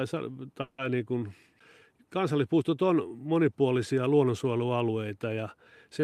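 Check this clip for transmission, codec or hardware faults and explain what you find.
There is one fault, a call audio freeze, from 0.61 to 0.80 s. For about 170 ms the speech stops moving forward and the last sound is held as a fading buzz, with no fall to silence. When it resumes, the speech picks up exactly where it broke off, with nothing skipped, so everything after it arrives about 170 ms later. This is likely a packet delay that drained the jitter buffer, with the receiver filling the wait until the packets arrived.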